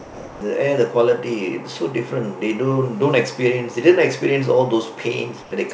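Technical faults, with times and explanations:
0.00–0.41 s, sound dropped by the voice detector: the clip opens on about 0.41 s of flat, steady hiss, and roughly 160 ms of actual speech inside that stretch never comes through. It sounds like the sender's voice detector mistook the quiet start for background and held off transmitting, so the receiver played synthetic comfort noise until the detector kicked in. The codec band, which stops at 8 kHz, carries on past that point as usual.
5.42–5.51 s, comfort noise in place of the background: for about 90 ms near the end, the real room background, sitting about 23 dB below the loud parts, turns into a smooth, featureless hiss about 2 dB quieter. That's likely discontinuous transmission: the sender stopped sending during the pause and the receiver filled the gap with generated noise shaped roughly like the background, so the texture flattens before the audio resumes.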